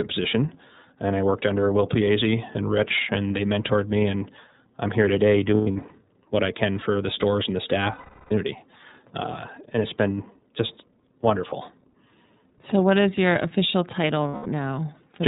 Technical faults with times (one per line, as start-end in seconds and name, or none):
0.00-15.27 iLBC codec
5.55-5.92 lost iLBC frames
7.92-8.32 lost iLBC frames
14.28-14.46 lost iLBC frames